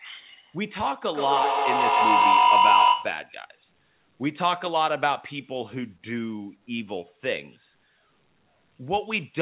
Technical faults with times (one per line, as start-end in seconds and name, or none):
1.08-3.33 feedback howl